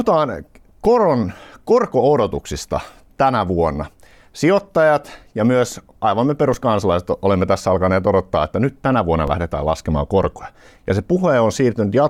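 A DC step occurs at 0.85 s, 6.54 s and 9.28 s: each time, the waveform's zero line suddenly jumps by about -16 dBFS (about -17 dBFS at the last) and then bleeds away as a 20 Hz high-pass pulls it back to centre within a few tens of milliseconds. Each jump is heard as a short, dull low thump under the speech, which continues unaffected through each event.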